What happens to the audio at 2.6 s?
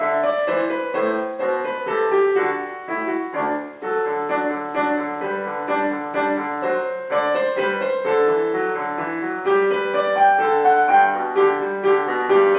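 Nothing goes wrong at 2.6 s; the audio is intact at that moment.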